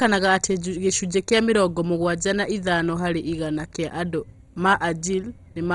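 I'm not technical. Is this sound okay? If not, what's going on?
No. The speech sounds dull and muffled from start to finish. Nothing comes through above about 11.2 kHz, so the crisp top end is missing. The voice also has a heavy gurgling, grainy roughness. This is likely MP2 compression squeezed too hard. That format splits sound into narrow bands and shares out a small budget of detail. When the budget runs short, upper bands get dropped and the rest are stored roughly.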